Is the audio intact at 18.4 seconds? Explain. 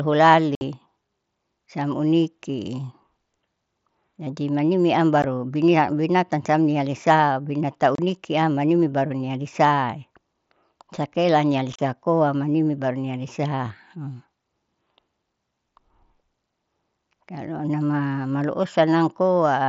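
Yes, the speech at 18.4 seconds is intact, carried cleanly through the Bluetooth mSBC headset codec with its band limit at 8 kHz and nothing breaking up at that point.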